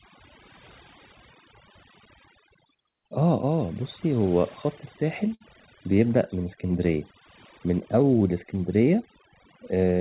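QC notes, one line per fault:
Throughout: overdone noise removal. The suppressor is set far too hard, so each frequency band that dips close to its noise estimate is pulled down or shut off entirely. The quieter parts of the speech get caught and removed along with the noise. What should be a steady noise floor becomes near silence scattered with twinkling, chirpy specks. The band-limited top end, with nothing above 4 kHz, fits a narrowband call codec such as G.711 and is separate from this fault.
5.34–5.42 s: short stall from a late packet. A packet missed its playout deadline and the jitter buffer ran dry, so the receiver stretched the last bit of sound for about 59 ms until the data arrived. It then resumed from exactly where it stopped, so nothing is lost. The sound is simply held a touch too long, with a faint buzzy or dipping quality, and everything after it runs about 59 ms later than before.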